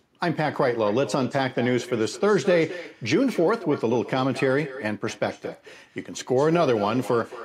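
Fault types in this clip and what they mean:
echo with no canceller: Throughout the speech, each phrase is followed a short moment later, roughly a fifth of a second, by a fainter repeat sitting about 15 dB below it. That repeat comes from the far end, where the call plays over a loudspeaker and the microphone there captures it again. No echo cancellation removes it, so it travels back across the network and lands as a thin shadow trailing everything said.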